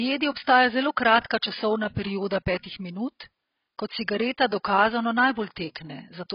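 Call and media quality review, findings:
AAC compression, likely heavy AAC-LC at a very low bitrate, around 16 kbps. Encoder drops everything above 5.2 kHz and starves remaining bands. Speech is dull and muffled throughout, with smeared, warbling sibilants and fizzy texture on sustained sounds.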